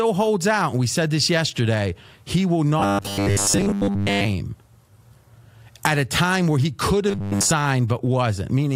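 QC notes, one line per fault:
2.80–4.26 s and 7.09–7.51 s, robotic sound from repeated short buffers: after "this yesterday he will" and "time where he could", speech turns into a rigid metallic 100 Hz buzz, likely a roughly 10 ms buffer replayed over most of the audio. The spectrogram shows flat 100 Hz harmonic stripes, and the waveform shows identical 10 ms cycles.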